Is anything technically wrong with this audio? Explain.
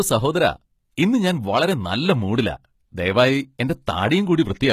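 Yes. Throughout, the speech was likely squeezed through HE-AAC compression, consistent with roughly 20 kbps, so its treble, which stops at 14.9 kHz, is rebuilt from copied lower bands, making sibilants sound gritty and metallic.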